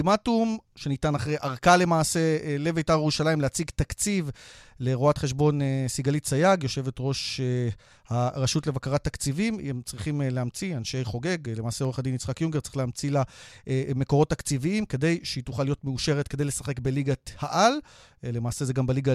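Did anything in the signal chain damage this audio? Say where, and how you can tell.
No, nothing in the signal chain damaged this audio.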